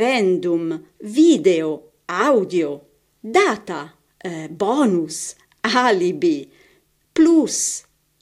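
Nothing here needs flagging: a short bit of speech with no technical problems to point to anywhere along the way.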